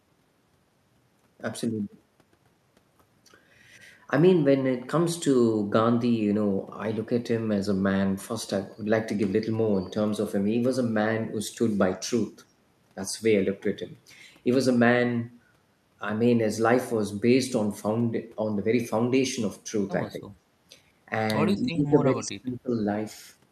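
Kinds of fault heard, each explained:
Speech suppressed in double talk: speech drops about 20 to 30 dB, likely from echo-canceller ducking during overlap, leaving hollow waveform gaps.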